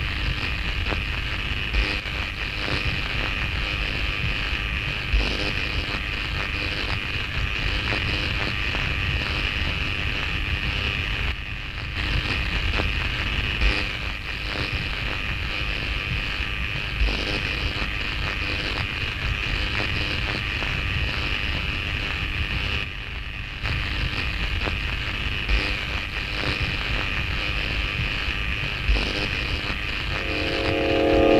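At 2.00 to 2.06 s, 11.32 to 11.96 s and 22.84 to 23.64 s, the level drops abruptly by about 6 dB, likely one channel dropping out: the waveform envelope steps down and the spectrogram dims evenly across all frequencies.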